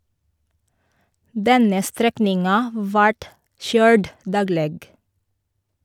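No technical faults are audible at any point in the recording.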